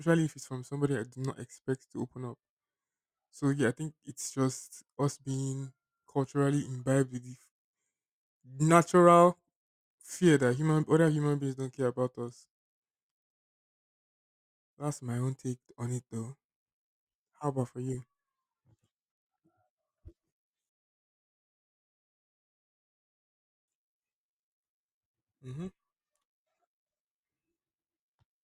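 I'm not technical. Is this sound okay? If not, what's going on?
No. Rebuffering stalls at 13.35 s and 20.69 s: playback ran out of downloaded speech, went silent for 1.3 s and then 3.0 s, and resumed exactly where it stopped, losing nothing.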